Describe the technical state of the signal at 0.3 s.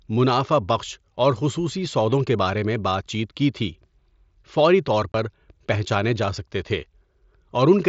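At 0.3 s the speech is intact, with no fault, carried through the Bluetooth mSBC headset codec at its 8 kHz wideband limit and only the light graininess that codec leaves on louder sounds.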